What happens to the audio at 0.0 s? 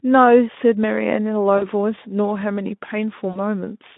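At 0.0 s the speech is intact, with no fault at that moment.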